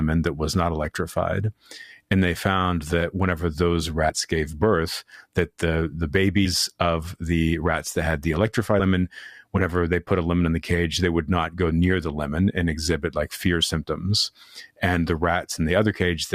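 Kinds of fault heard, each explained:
Compressed frames skipped: The speech jumps forward three times, at 4.09 s, 6.45 s and 8.79 to 8.82 s, each time losing around 70 ms of sound. Whole compressed frames were never played, either missing or rejected by the decoder as damaged. The size of each jump fits a few 20 ms frames.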